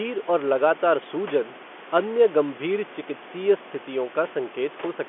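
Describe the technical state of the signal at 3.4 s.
At 3.4 s the audio is intact, with no fault present, just the room noise about 17 dB below the speech and the narrow telephone band of G.711 coding running as expected.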